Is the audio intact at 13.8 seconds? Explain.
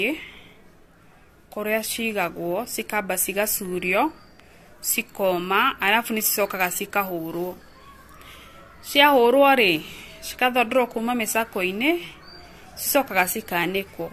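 No. At 13.8 seconds the speech carries generation loss, as it does from start to finish. The sound is swirly, smeared and hollow, and consonant onsets are blurred. Nothing reaches above 14 kHz. The likely cause is repeated lossy coding, about four passes through AAC-LC at 64 kbit/s. Each pass requantises on a shifted frame grid. The noise and spectral gaps pile up beyond what that bitrate alone would leave.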